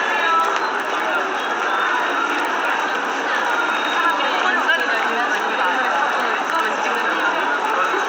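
Throughout the clip, a steady 20 Hz ticking rides on the sound, the mark of a resampler restarted on every block. Each 50 ms block was converted separately, likely from 16 kHz to 48 kHz, leaving an error at every edge. Unlike hum, it stops when the sound stops.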